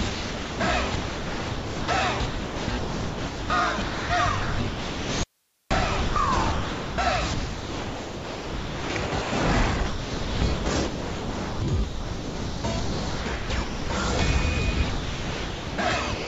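From 0.10 to 9.32 s the sound is chopped by the voice detector. Roughly 6.3 s of that stretch is replaced by a smooth synthetic hiss, so quiet passages and the edges of louder ones vanish. The likely cause is a sender-side voice detector gating transmission on and off, with the receiver filling gaps with comfort noise of the kind RFC 3389 describes.

Inside that stretch, from 5.24 to 5.71 s, there is an audio dropout to a faint residue. For about 0.47 s the signal cuts out abruptly, leaving only hiss at roughly 45 dB below the normal level, then returns just as suddenly. It is not a fade or a natural pause. The path likely stayed live while the wanted signal was lost.

The voice-detector chopping returns from 9.86 to 13.90 s, where about 3.1 s is replaced, and again from 14.90 to the end at 16.27 s, where about 1.0 s is replaced. It has the same clipped-edge character as the first stretch. 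Throughout, the call path's G.722 coding leaves nothing above 8 kHz, which gives the sound its band-limited top end.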